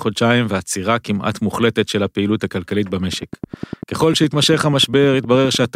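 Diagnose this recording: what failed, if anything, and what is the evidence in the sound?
A train of clicks runs from 3.13 s to 5.66 s: about thirty near-identical pulses at a regular 10 per second, peaking about 5 dB above the speech and heard as ticking through the pauses. The cause is likely interference coupling into the analogue wiring.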